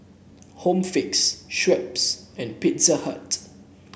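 Speech recording, with no technical faults to be heard. Nothing in the audio points to a problem in how it was captured, processed or delivered.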